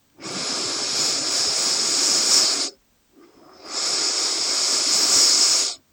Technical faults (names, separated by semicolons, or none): none